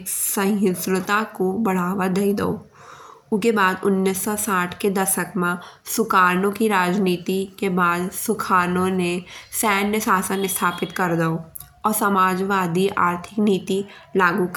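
No technical faults can be heard anywhere in this recording.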